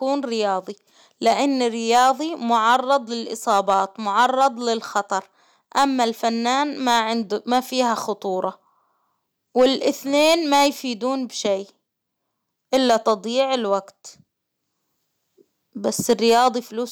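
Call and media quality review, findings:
Hard clipping, throughout the speech. Peaks are driven about 4 dB past the stage's ceiling and cut flat, under one percent of samples. The squared tops add high harmonics, giving crackle on louder syllables. Probable component: gain stage or converter input overload.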